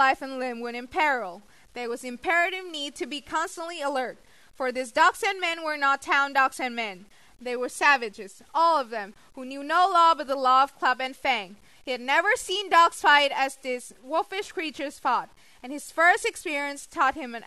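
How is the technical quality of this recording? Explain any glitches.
The technical quality is poor. A grainy distortion runs through the whole speech clip. It is most likely low bit depth without dither: the sound seems truncated to a coarse grid, which fits about 9 bits. The error tracks the signal and sits only around 35 dB below it, so quiet passages sound gritty and the softest tails sputter or cut to silence. A zoomed waveform would show stair-stepped samples. A spectrogram would show broadband hash that rises and falls with the speech instead of a steady noise floor.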